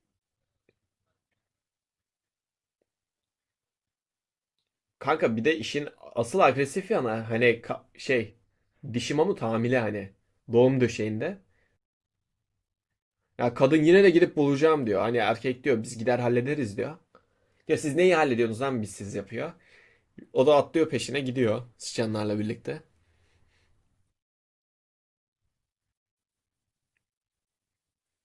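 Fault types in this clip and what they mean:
No faults can be heard.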